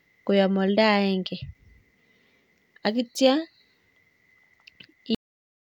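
At 5.15 s the speech stops mid-sound, dropping straight to digital silence: a cut-off end, as the final buffers never got written or played.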